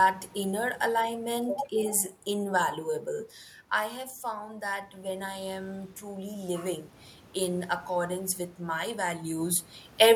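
Right after "alignment is invaluable I", from 3.88 to 6.93 s, there's automatic gain rising: the level drops about 10 dB as the talker backs off around 3 s, and the control slowly adds about 5 dB, so voice and room noise swell together until "in accordance with my".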